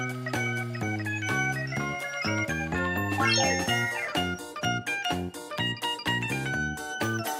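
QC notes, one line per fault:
No faults found. Nothing in the audio calls for a QC entry.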